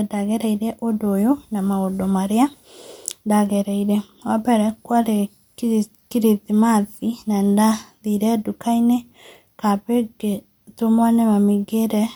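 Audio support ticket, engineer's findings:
No transport or processing fault heard anywhere in the speech signal; no dropouts, discontinuities or timing errors that would point to a failing component.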